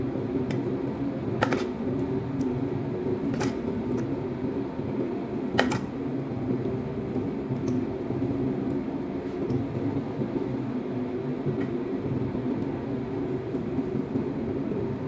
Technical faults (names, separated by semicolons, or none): none